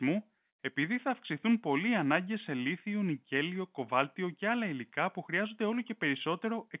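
No technical faults can be heard in the speech, which keeps the narrow telephone-band sound of its G.711 coding throughout.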